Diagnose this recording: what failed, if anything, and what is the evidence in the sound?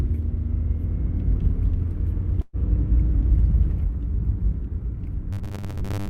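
Network failure first. From 2.41 to 2.56 s there is a burst of packet loss. The last sound is held and fades for about 117 ms. Playback then resumes further on, with roughly 120 ms of audio skipped rather than silenced.

From 5.33 s to the end, the sound turns into a rigid, metallic robotic buzz at 100 Hz. That pitch matches a 10 ms block played repeatedly. About half the audio is replaced. The likely cause is a starved driver or buffer stage reusing short buffers.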